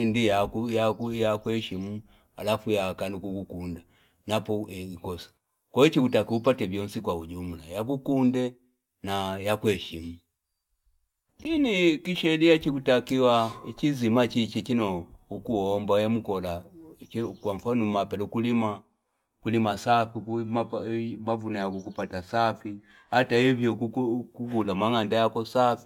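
No technical faults can be heard anywhere in the recording. The speech runs without any break or disturbance that would point to a problem in how it was captured or delivered.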